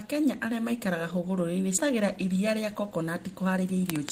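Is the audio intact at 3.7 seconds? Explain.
No. From 3.57 to 3.98 s the speech runs hurried at an unchanged pitch, about 109% speed. This is jitter buffer speed-up: with excess audio queued, the receiver cut several short pitch-period slices, roughly 50 ms in all, to shrink the delay.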